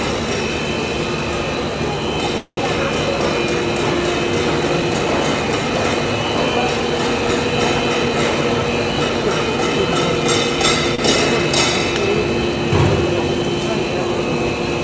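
From 2.38 to 2.59 s the sound hangs as a fading buzz or hiss that drops to about 60 ms of silence, then resumes exactly where it stopped. This call audio freeze was likely the jitter buffer running empty while packets were held up, with about 190 ms filled in and nothing lost.

Between 10.95 and 11.00 s one sound is briefly held too long with a faint buzzy dip before moving on. This short stall from a late packet came from the jitter buffer stretching the last sound by about 33 ms until the packet arrived, so nothing is missing.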